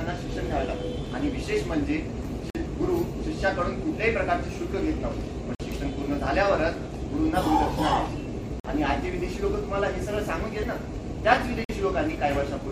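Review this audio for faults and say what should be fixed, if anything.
Short, hard-edged holes of silence cut into the sound at 2.50–2.55 s, 5.55–5.60 s, 8.60–8.65 s and 11.65–11.69 s, each about 48 ms long and recurring every 3 s. This is a gap between chunks: the audio was delivered in 3-second chunks, and each join gets a fixed stretch of silence, likely from codec padding or a player that starts each chunk late. Nothing is lost, but the flow breaks at every boundary. Prevent it by trimming encoder padding and scheduling each chunk to start exactly where the previous one ends.

At 10.62 s there is a brief blip. This is damaged data in a compressed stream: a short run of corrupted or missing bytes made the decoder misread the frames there, lose sync and skip ahead to the next valid frame header. Prevent it with checksummed transport or storage and error detection, so corrupted frames are caught and resent or concealed before playback.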